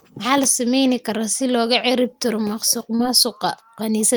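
Just after "kara si looga ciribtiro", at 2.95 to 3.01 s, the speech briefly smears and wobbles. This is short concealed packet loss: about 40 ms of audio arrived too late, so the receiver extended the preceding sound for roughly 35 ms, then faded back into the real signal.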